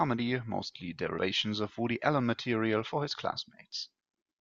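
At 1.18 s the decoder drops whole compressed frames, either missing from the stream or rejected as corrupt, so playback leaps forward by about 70 ms of speech, which fits roughly three frames of 24 ms each. These are compressed frames skipped. At the join a short stretch of the speech simply vanishes.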